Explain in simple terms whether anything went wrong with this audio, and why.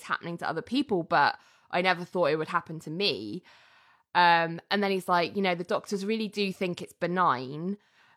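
Nothing went wrong with this audio, so there is no fault to explain.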